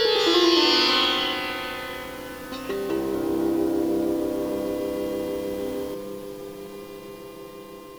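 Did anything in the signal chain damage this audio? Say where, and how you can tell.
Yes. From about 5.95 s to the end at 7.98 s there's channel delay (comb filtering): the sound turns hollow and phasey. One channel lags by around 5 ms before a mono fold-down, so notches start near 100 Hz and repeat evenly. That points to the buffer or mixdown stage.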